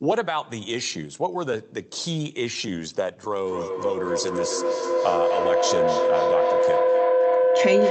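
Feedback howl begins at 3.45 s and continues to the end of the clip at 7.9 s. The sound leaving a loudspeaker is picked up again by a microphone on the same call, and each trip around that loop adds level. Because of this, the repeats build up instead of dying away. The sound narrows to a tone around 500 Hz, with the loop repeating roughly every 0.3 s, and it peaks at about 4 dB above the speech.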